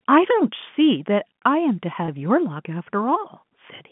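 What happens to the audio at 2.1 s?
From 2.06 to 2.08 s there is a packet loss with pitch repetition: 20 ms of speech, which fits one lost packet, was filled by repeating the last pitch period. Unlike a dropout, nothing goes silent or clicks. The sound briefly holds with a slight buzz.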